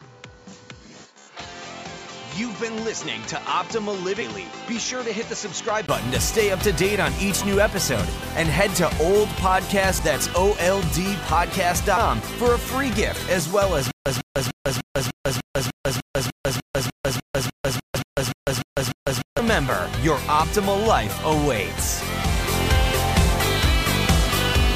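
For the first 5.89 s the audio is band-limited, with nothing above 7.6 kHz, somewhat quieter than what follows and carrying a noise floor of its own well below the signal. At 5.89 s a short silence of about 20 ms leads into the fuller sound. This fits an input switched to a poorer device, likely a second microphone or a headset's call profile, whose narrower band, lower level and different noise make the opening sound dull and boxy before the proper input takes over. At 9.99 s and again from 17.95 to 17.97 s there are brief glitches, the signature of damaged data in a compressed stream. The decoder hits corrupted frames it cannot read correctly, loses sync and jumps to the next valid frame header, so a sliver of audio is replaced by a glitch and a discontinuity. From 13.91 to 19.39 s the sound turns into a stutter with silent gaps. A 149 ms fragment plays, then about 150 ms of digital silence, repeating 19 times on an even 299 ms cycle. 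This is likely a stalled player or stream that replays its last buffered fragment on each retry and then runs dry. Whatever should have played in that stretch is lost, and the second compressed-stream glitch falls inside this span.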